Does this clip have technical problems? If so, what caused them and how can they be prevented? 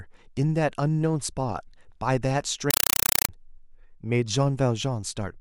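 Yes. From 2.71 to 3.29 s the speech is replaced by very loud, chattering static: a compressed stream played as audio. Short bursts of noise about 4 ms long repeat 31.25 times a second, each followed by silence. That pattern points to a Dolby Digital (AC-3) bitstream being passed to the output as if its data words were ordinary samples. To prevent it, decode the stream before playback or set the receiving device to recognise and decode bitstream input.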